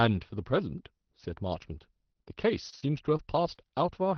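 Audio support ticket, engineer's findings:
Short concealed packet loss, 2.13–2.17 s and 2.23–2.28 s. Jitter buffer missed packets, about 20 ms then 40 ms. Decoder concealment extended the preceding sound from pitch or shaped noise, then blended back. Heard as two brief smears or wobbles close together; a short consonant in that stretch may drop out.

Lost packet rebuilt from error correction, 2.26–2.28 s, about 20 ms. Packet lost, but the following packet carried a low-bitrate redundant copy (Opus in-band FEC), so no gap there. The rebuilt frame is rougher and grainier than surrounding audio, overlapping the tail of the second concealment. Bandwidth already capped near 6 kHz, consistent with a roughly 20 kbps Opus stream.

Repeated packet loss (robotic sound), 2.70–3.60 s. Network loss or late arrival recurring across the span. Four gaps, longest 32 ms, about a tenth of the span concealed, roughly 0.1 s in total. 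Each hole patched by extrapolating the last sound before the next one arrives, producing choppy audio with small pieces missing.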